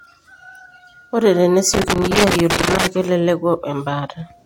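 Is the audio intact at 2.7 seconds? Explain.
No. At 2.7 seconds the speech is inside a burst of loose connector crackle running from about 1.74 to 2.87 s. A worn or dirty contact is making and breaking as it shifts, so the signal is chopped on and off, heard as irregular scratching and crackle. On a waveform this shows as ragged gaps and sharp spikes; on a spectrogram, as scattered vertical broadband streaks across the whole band.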